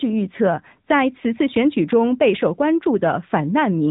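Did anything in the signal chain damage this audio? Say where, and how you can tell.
Yes, it went through the codec stage: an AMR narrowband mobile codec, audible across the whole clip. Nothing above 3.8 kHz survives, so the speech has that flat, boxed-in phone sound, and the damage is plainly audible as a buzzy, synthetic edge. That points to a mid-rate mode of around 10 kbps. The codec models the vocal tract and drives it with a handful of pulses every few milliseconds, and at that budget the excitation sounds coarse.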